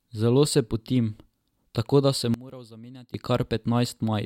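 Speech drops by about 21 dB from 2.34 to 3.14 s and turns faint. The likely cause is one channel inverted, so the shared centre cancels when the channels sum to mono. The waveform shows a sudden narrow band, and the spectrogram shows the whole band fading.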